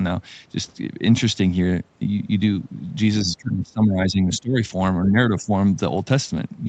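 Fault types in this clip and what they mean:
Speech suppressed in double talk: between 3.24 and 4.6 s the speech dips sharply, losing about 20 dB at worst and about a second in total. From 5.07 to 5.51 s it dips more gently, by about 10 dB. The likely cause is an echo canceller turning the near talker down while the far side spoke. On the waveform the envelope caves in. On the spectrogram the harmonics fade in those stretches.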